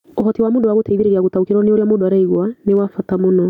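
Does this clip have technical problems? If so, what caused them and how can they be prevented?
Yes. Gain pumping runs throughout: the gain ducks by about 15 dB under each loud sound. This is likely a fast limiter fighting excessive input gain. Unlike ordinary noise, it breathes with the signal. Prevent it by lowering the preamp gain so the limiter rarely acts.

A time-stretched section covers 0.00 to 2.08 s, running 1.44 times faster, rushed but at unchanged pitch. A simple playback-speed error would raise the pitch. Prevent it by editing for length instead of stretching.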